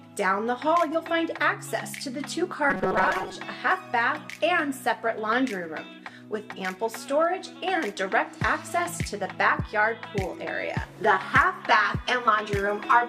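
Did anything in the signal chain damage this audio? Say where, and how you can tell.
Yes. From 2.70 to 3.35 s the sound turns into a rigid, metallic buzz fixed at 188 Hz: robotic sound from repeated short buffers. This likely comes from a driver or buffer underrun, looping a roughly 5.3 ms block while about half the real audio is skipped.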